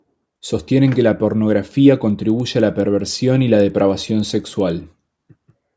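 From 2.1 s, just after "que la pornografía", to the end, a resampler restarted on every block puts a faint tick every 100 ms, a steady 10 Hz pattern under the speech. Each block is converted without its neighbours' samples, likely in a 44.1 kHz to 16 kHz conversion, leaving a small error at every edge.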